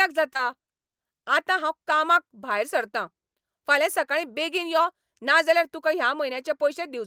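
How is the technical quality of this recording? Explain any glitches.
The main issue is a short concealed packet loss right near the start of the speech, happening twice back to back. The first hit runs from 0.33 to 0.37 s and the second follows straight on from 0.37 to 0.41 s. Each time about 20 ms of audio never arrived, so the receiver patched the gap by carrying the last sound forward, roughly 12 ms and then 22 ms of fill, before easing back into real audio. You hear it as a quick smeared wobble lasting a bit under a tenth of a second.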